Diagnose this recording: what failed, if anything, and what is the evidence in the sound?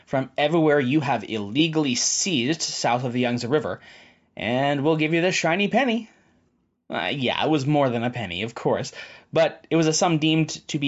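Nothing in the recording points to a failure at any stage, from the wiring and converter through to storage and playback.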